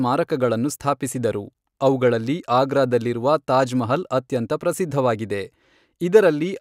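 No technical faults can be heard in the speech. At no point in the recording is the sound disturbed.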